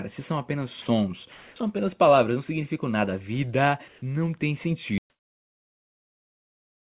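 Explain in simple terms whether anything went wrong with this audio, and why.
Twice early on, at 0.82 to 0.86 s and 1.32 to 1.56 s, the speech briefly gives way to a flat hiss. That is sound dropped by the voice detector, likely because the call system mistook real speech for background and stopped sending it.

From 3.88 to 4.02 s the natural room sound turns into a smooth hiss at a different level. This is comfort noise in place of the background, likely generated by the receiving end to fill a pause when nothing was being sent.

At 4.98 s the sound cuts out completely and stays silent until the end. This is an audio dropout to silence, likely from the input being lost while recording continued.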